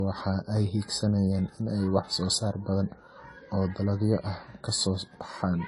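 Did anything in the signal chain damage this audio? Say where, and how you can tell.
Yes, at the codec stage: throughout the speech nothing sits above 11.4 kHz, which points to low-bitrate audio saved at a high bitrate, likely an earlier lossy pass re-encoded.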